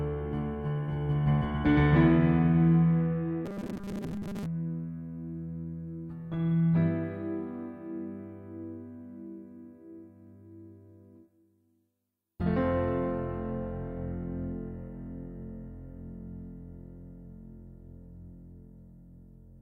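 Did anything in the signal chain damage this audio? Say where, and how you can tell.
Yes, buffer stage. From 3.45 to 4.46 s, robotic sound from repeated short buffers: a rigid 200 Hz buzz. Likely starvation looping 5 ms chunks.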